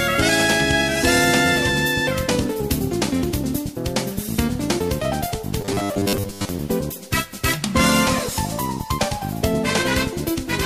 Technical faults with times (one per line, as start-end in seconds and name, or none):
5.61-6.51 robotic sound from repeated short buffers